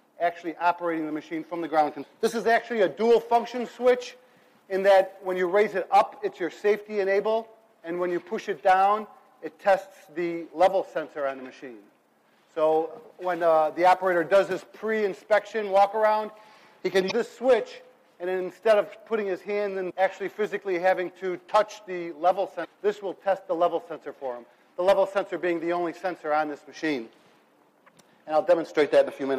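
At 17.07 to 17.12 s and 22.61 to 22.66 s, damaged data in a compressed stream makes the decoder lose frame sync, causing brief glitches that show as short disruptions on a spectrogram.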